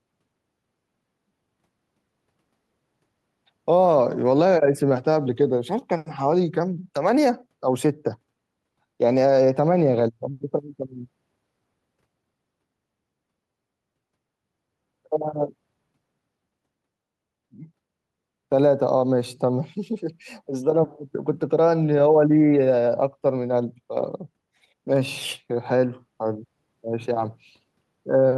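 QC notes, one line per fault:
No faults found in this speech recording. Nothing in it calls for a QC entry.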